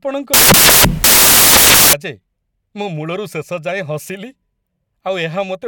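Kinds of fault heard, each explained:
Samples built from the wrong bytes: loud, harsh broadband noise from 0.34 to 1.93 s, as each sample's bytes were joined wrongly, making fast-changing low bits dominate.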